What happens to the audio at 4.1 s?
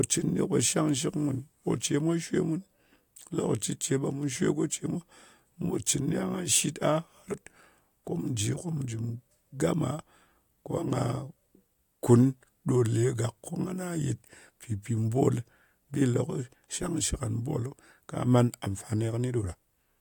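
Nothing goes wrong at 4.1 s; the speech passes through that moment intact, with no dropout, click or distortion.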